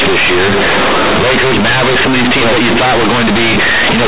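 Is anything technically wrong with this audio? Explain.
Yes. Companded audio read as linear runs throughout the clip. The bytes were written as A-law G.711, the 8 kHz telephone coding, but they are being played as plain linear 8-bit samples with no expansion back to a linear scale. Because the logarithmic codes are taken at face value, every sign change throws the output across roughly half its range and quiet passages come out as loud as the peaks. The speech sounds very loud and harshly buzzy and distorted, with strong noise filling the pauses.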